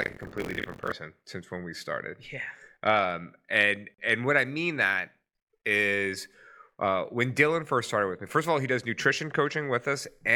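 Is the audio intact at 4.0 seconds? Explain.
No, a gap at a join of encoded pieces opens from 3.94 to 3.98 s: 41 ms of untrimmed encoder silence, its edges smeared, after which the speech resumes exactly where it stopped, with nothing skipped, unlike a dropout.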